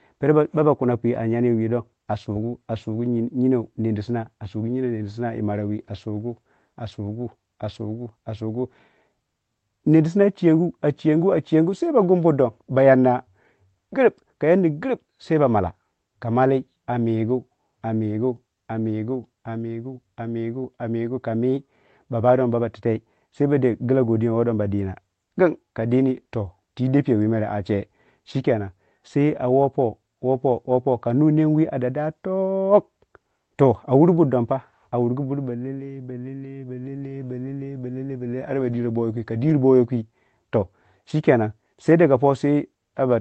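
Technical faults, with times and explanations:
No technical faults can be heard in this speech, which comes through a WebRTC call path with its top end stopping at 8 kHz, consistent with Opus at around 24 kbps.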